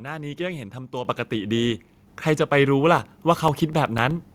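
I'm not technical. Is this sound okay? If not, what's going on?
No, not quite. Two separate things are going on.

The first is the microphone volume stepping up, and it happens twice. At about 1.05 seconds the level suddenly jumps louder, and at about 2.07 seconds it jumps again, a bit less this time. The call software decided the mic was too quiet and turned up the input in one go, so the voice and the room sound behind it get louder together.

The second is periodic USB or driver dropouts. From about 2.98 to 4.23 seconds you can hear a steady run of little ticks, about ten of them, evenly spaced eight times a second. Something on the computer is briefly blocking the USB connection or the audio driver on a fixed schedule. Each time, a tiny slice of sound, a couple of thousandths of a second, goes missing and is replaced with silence, and that gap is what you hear as a tick.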